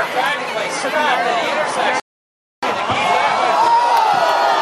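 At 2.00 s the audio cuts to silence and stays there until 2.63 s, then picks up exactly where it left off. This is a rebuffering stall: playback drained its downloaded audio and paused for more data, adding 627 ms of time without losing any content.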